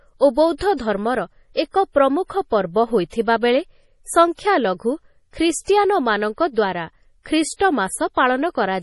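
From start to finish the speech sounds watery and swirling, with metallic chirps on s sounds, smeared consonant attacks, and nothing above 11.4 kHz. This is heavy damage from MP3 compression, likely encoded at a low bitrate near 32 kbps. Short of bits, the encoder cut off the treble at that fixed frequency and zeroed out weak frequency lines. Those lines flicker on and off from frame to frame and produce the swirl.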